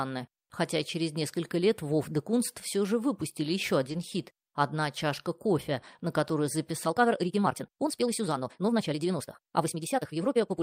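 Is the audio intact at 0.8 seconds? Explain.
Yes, the audio at 0.8 seconds is intact, with no fault present at that moment.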